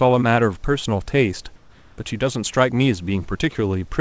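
From 1.56 to 1.98 s, a pause of about 0.42 s, the room noise behind the speech, sitting about 39 dB below it, turns into a smooth, even hiss with none of its earlier texture, at much the same level, before the real background returns with the sound. This is comfort noise in place of the background, likely from discontinuous transmission: the sender stopped sending during the gap, and the receiver filled it with synthetic noise matched to the background's rough shape and level.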